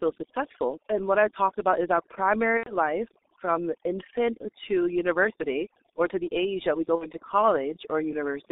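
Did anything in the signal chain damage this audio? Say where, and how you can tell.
Yes. Overdone noise removal in the call processing stage damaged the speech throughout. The background sits near silence with twinkling specks. The suppressor cut individual frequency bands it judged as noise, and quiet parts of the speech went with them.

The codec stage shows G.723.1 damage throughout, and it is heavy. The speech is confined to roughly 250 Hz to 3.7 kHz. It sounds muffled and hoarse, with smeared consonants. That fits a 6.3 kbit/s G.723.1 stream, whose slow 30 ms frames blur fast detail.

The network stage shows VoIP packet loss concealed by the speech codec. From 2.57 to 2.76 s, after "talked about is our" and before "from infant to university", the speech turns into a fading buzzy tone or coloured noise. The same happens from 6.96 to 7.06 s, after "the age that we". The gaps fit about 90 ms and 60 ms of lost 30 ms frames. 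The decoder extrapolated from its last state, so the speech stays weak just after each gap.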